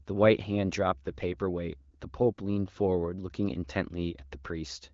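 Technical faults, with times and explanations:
No technical faults are audible anywhere in this recording.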